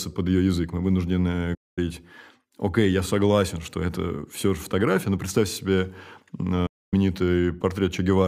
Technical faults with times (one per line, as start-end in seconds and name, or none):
1.54-1.78 digital broadcast dropout
6.66-6.93 digital broadcast dropout